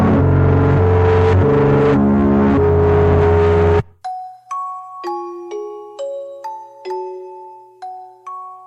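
No technical faults are audible.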